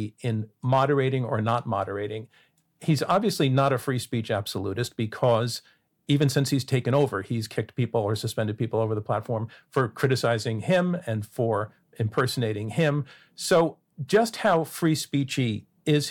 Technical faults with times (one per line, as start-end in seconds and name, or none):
0.00-16.10 hard clipping